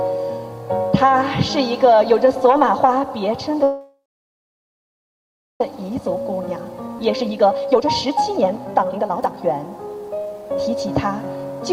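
At 3.63 s the sound stops and resumes at 5.61 s, a call audio freeze, likely from delayed packets. A brief fading buzz leaves about 1.6 s of blank spectrogram before playback continues unchanged.

From 5.81 to 10.84 s, jitter buffer speed-up runs the audio at 129% speed with unchanged pitch, cutting roughly 1.5 s of built-up delay. Harmonics stay level while events crowd closer together.

At 6.98 s a skip ahead drops about half a second, joining the two sides almost directly. It appears as an abrupt waveform splice with only a tiny gap of about 9 ms.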